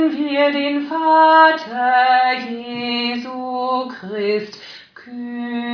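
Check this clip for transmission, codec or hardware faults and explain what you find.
Nothing here sounds wrong from a transmission or hardware standpoint, so there's nothing to flag.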